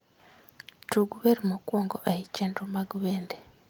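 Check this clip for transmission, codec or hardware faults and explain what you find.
No transmission, codec or hardware faults turn up anywhere in this clip.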